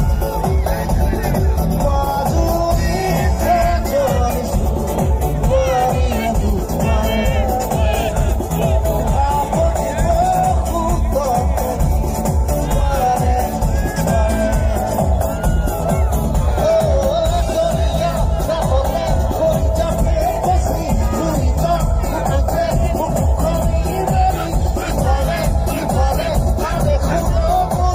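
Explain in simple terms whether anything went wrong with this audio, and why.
Nothing went wrong here; listening all the way along, there's no moment where the audio stumbles, breaks up or changes in a way that shouldn't happen.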